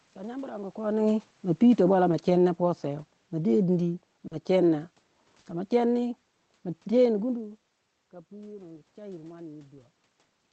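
Automatic gain falling runs from 1.47 to 5.08 s in this speech recording: the gain control judged the input too loud or its background noise too strong and eased its gain down by about 6 dB, so the voice and the room noise behind it sink together over those few seconds. A short stall from a late packet follows at 4.27 to 4.34 s. A packet arrived about 40 ms late, the jitter buffer emptied, and the receiver held the last sound for 40 ms before resuming in the same place, so nothing is lost, but a sound drags with a faint buzz or dip. Lost packet rebuilt from error correction occurs twice, at 4.31 to 4.37 s and 5.45 to 5.51 s. Each time, 60 ms of audio was decoded from the low-rate copy carried in the next Opus packet, so there is no gap, only a rougher, noisier patch. A burst of packet loss hits at 5.39 to 5.48 s. The receiver stretched and faded the last sound for 60 ms, then jumped ahead, so 60 ms of speech is simply missing. 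Throughout, the call codec limits the audio to about 8 kHz.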